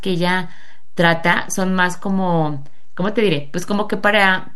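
A speech recording carries a DC offset for its entire length: the waveform sits shifted off the zero line by a constant amount, about -23 dBFS, so every excursion rides on that fixed displacement. It can't be heard as a sound, but it eats into headroom on one side of the signal. On a waveform display the trace hovers visibly off-centre; on a spectrogram it shows as a steady band of energy pinned to 0 Hz.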